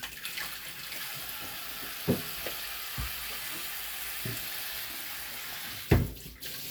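No technical faults are audible anywhere in the audio.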